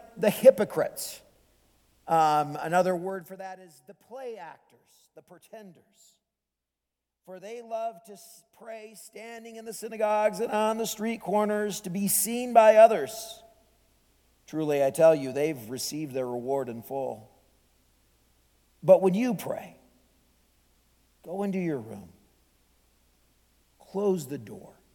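From 2.88 to 3.54 s the level drops about 20 dB as zipper noise, in 2 dB steps at roughly fifteen per second. Each unsmoothed jump clicks. From 9.02 to 10.57 s a similar rise ticks more slowly, near seven steps per second.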